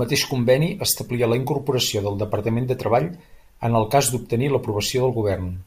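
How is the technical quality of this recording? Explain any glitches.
No glitches are audible anywhere in this speech recording, so there is nothing to explain.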